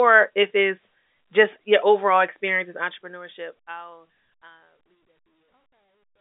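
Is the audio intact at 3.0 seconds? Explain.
Yes, the audio is intact at 3.0 seconds.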